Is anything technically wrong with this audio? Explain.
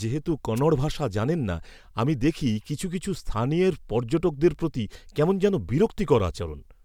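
Yes, two faults can be heard.

Throughout the speech there is a faint hiss and roughness that swells on loud, bright passages and disappears in pauses. This is sample clock jitter: an unstable converter clock, wobbling by around a microsecond, sets samples slightly off-time, leaving error roughly 50 dB below the signal that grows with steep waveforms.

From 0.56 to 0.60 s, just before "ভাষা জানেন না আমি", a short burst of static swishes over the voice. This is a wireless microphone noise hit: the FM radio link briefly faded as reflections cancelled, letting receiver noise rise and break through.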